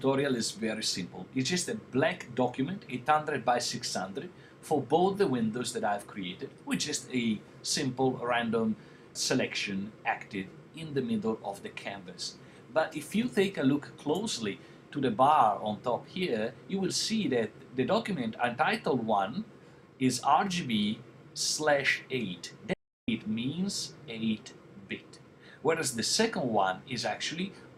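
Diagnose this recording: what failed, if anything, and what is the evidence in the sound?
The input stage failed briefly. There is an audio dropout to silence from 22.73 to 23.08 s, about 0.35 s long. The sound stops abruptly and resumes abruptly. The gap is silent, with no room tone or noise floor underneath. Whatever was in that span is simply missing. The likely cause is a lost input, such as a momentary device disconnect, a broken link or a mute. The recorder kept writing silence until the signal returned.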